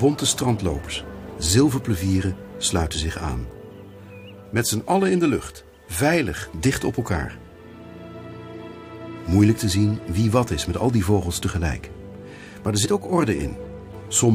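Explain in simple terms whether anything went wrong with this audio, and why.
Compressed frames skipped at 0.86 s and again at 12.84 s: the audio jumps ahead by roughly 50 ms each time, which fits about two missing frames of around 23 ms. Those frames were left out, so the sound skips ahead at each of those two points.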